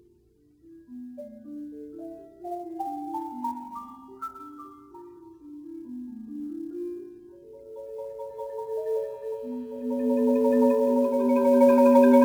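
Throughout the clip, sample clock jitter makes the converter's clock wander by roughly 7 microseconds, so each sample is taken slightly off time. The error, around 30 dB below the signal, is a grainy hiss that swells on loud, bright passages and disappears in silence.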